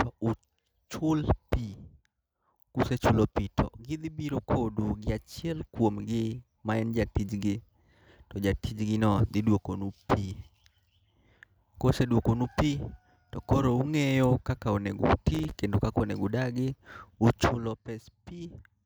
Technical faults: processor overload crackle

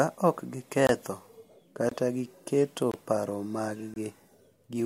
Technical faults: gap between chunks

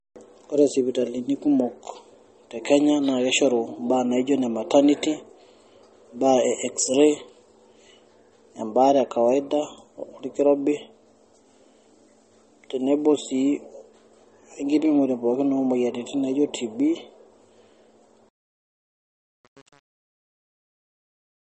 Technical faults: MP3 compression; truncation distortion on a fade

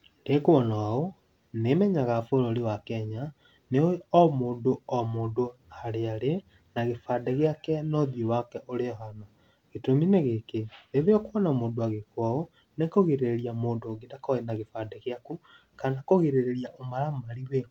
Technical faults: none

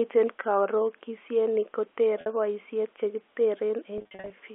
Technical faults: packet loss with pitch repetition

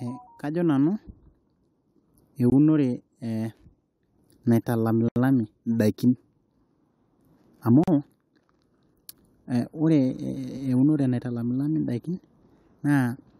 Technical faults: block of digital silence; damaged data in a compressed stream

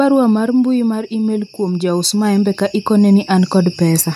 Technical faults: automatic gain falling; automatic gain rising

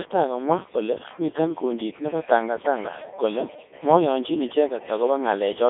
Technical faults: Codec 2 vocoder

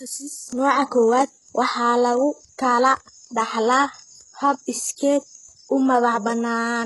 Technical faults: HE-AAC compression

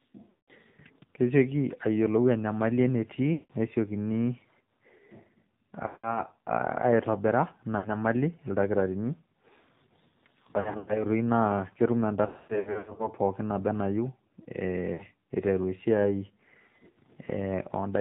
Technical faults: AMR narrowband mobile codec; lost AMR speech frames

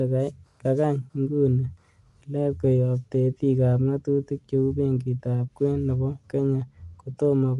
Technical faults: Bluetooth LC3 compression

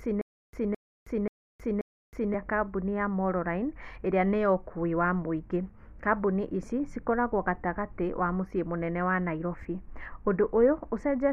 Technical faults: stutter with silent gaps

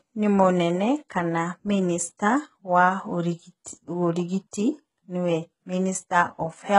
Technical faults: HE-AAC compression; pre-echo

